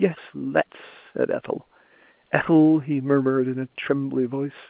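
The speech carries no technical faults, and it sits within the narrow telephone band expected of A-law G.711 coding at 8,000 samples a second, so nothing above 4 kHz is present.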